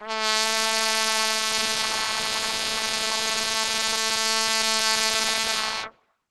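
From start to finish the music carries plainly audible Opus compression, likely from a very starved encode that fits a rate of around 16 kbps. Nothing survives above 12.1 kHz, and the hybrid speech mode leaves everything muffled and hoarse, with grainy, rough tones.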